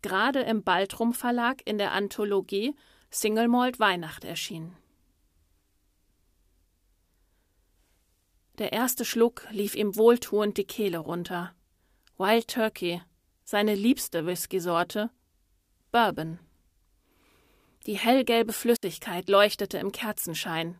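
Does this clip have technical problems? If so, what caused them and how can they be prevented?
Yes, there's a digital wireless dropout at 18.76 to 18.83 s, where the speech falls into a clean hole of near silence for about 67 ms. The receiver lost too much data and muted, with no noise burst around it. Keep the transmitter in clear line of sight and close to the receiver, away from competing RF.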